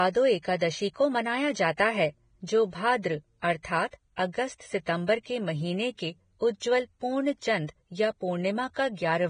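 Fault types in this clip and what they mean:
Vorbis compression: throughout the speech, nothing sounds above 9.7 kHz, and the upper range turns hissy and grainy with roughened tones. This heavy damage is likely from Vorbis coding, whose coarse treble quantisation swaps fine detail for noise, fitting a bitrate near 23 kbps.
pre-echo: at 1.77 s a brief hiss of about 16 ms comes just before a sharp onset. The codec spread its quantisation noise across a whole block, so noise sized for the loud attack filled the quiet moment before it and softened the attack.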